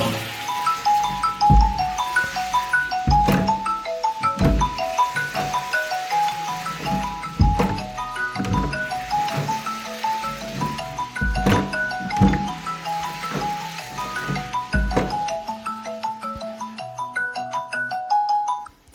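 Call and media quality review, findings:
No faults detected: the signal holds continuity throughout, with no dropouts, distortion or timing irregularities found on review.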